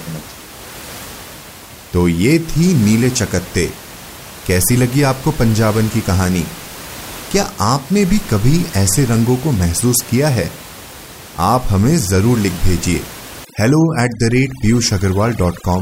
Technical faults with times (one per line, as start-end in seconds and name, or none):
13.45-15.81 overdone noise removal